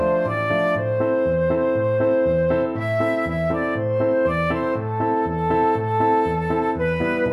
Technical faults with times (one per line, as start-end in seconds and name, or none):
none